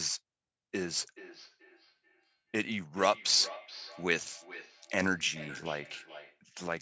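From 1.16 to 6.44 s there is feedback echo between two devices. A nearby device replays the speech into the microphone. Repeats come roughly every 0.4 s, at about 17 dB below the speech.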